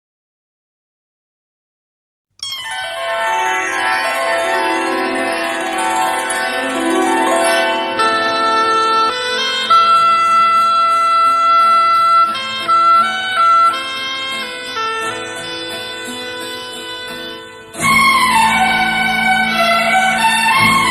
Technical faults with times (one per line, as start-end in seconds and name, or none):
9.09 skip ahead
9.72-10.87 jitter buffer speed-up